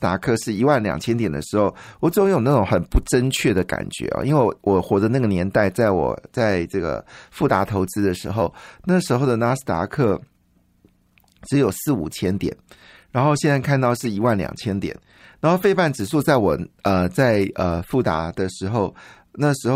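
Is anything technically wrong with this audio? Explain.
Yes. At 14.05 s there is a corrupt frame decoded in the speech. Flipped bits left wrong gains or codes, and the decoder played them. Energy lands at the wrong frequencies. It sounds like a brief, fairly quiet chirp, blip or burst of noise, which points to a single damaged frame.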